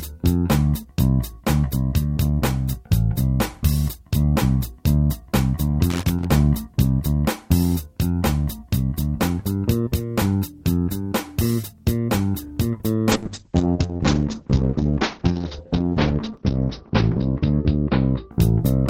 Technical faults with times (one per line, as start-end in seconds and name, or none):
5.90-6.25 loose connector crackle
13.12-18.61 call bitrate drop